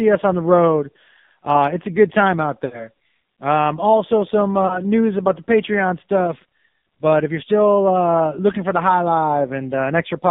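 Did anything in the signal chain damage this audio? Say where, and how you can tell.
Yes. At the codec stage, the whole clip went through the AMR narrowband mobile codec. The speech sits in a band from about 150 Hz to 3.7 kHz with nothing above, and the coding damage is heavy: the voice sounds buzzy and synthetic. That fits a low AMR-NB mode around 5.9 kbps, where the decoder rebuilds speech from a vocal tract model and a few excitation pulses per subframe. At that rate there aren't enough bits to reproduce natural texture.

At the network stage there are lost AMR speech frames. The first comes right after "a good time out", from 2.66 to 2.88 s. The sound smears and sags before recovering, which fits roughly three consecutive 20 ms frames failing. The decoder repeats the last pitch and filter settings with decaying gain. A shorter dip at 4.68 to 4.82 s, between "also some" and "news about the", matches a single dropped frame. 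It is concealed the same way, with a brief rough re-entry.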